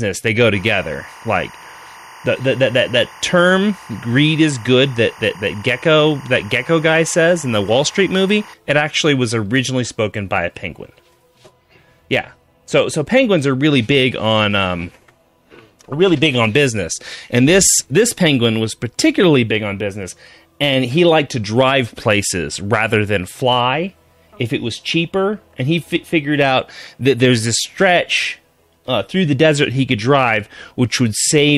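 Timecode bleed runs behind the sound from 0.54 s to 8.54 s: a chirping, warbling buzz roughly 25 dB below the main signal, flipping between pitches near 1 kHz and 2 kHz. Linear timecode from an adjacent track or cable has leaked into the audio, and its even rhythm fits 24-frame code. A steady whistle or test tone would hold one pitch. The constant two-pitch alternation, ticking along at the frame rate, points to timecode.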